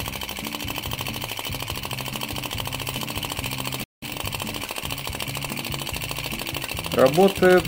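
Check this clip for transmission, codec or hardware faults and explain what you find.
Two linked playback faults interrupt the audio near the middle.

From 3.84 to 4.03 s there is a playback stall. The sound stops in mid-flow and goes silent for about 183 ms. It then resumes. The likely cause is a player that ran dry of data or had its output thread blocked, so nothing reached the output until it recovered. The gap is long enough to hear as a clear break.

From 4.03 to 4.21 s comes time-compressed catch-up. The player shortens its backlog after the gap. It drops small slices of audio and cross-fades across the joins. Here the sound runs at twice normal speed. The pitch stays the same. The result is hurried.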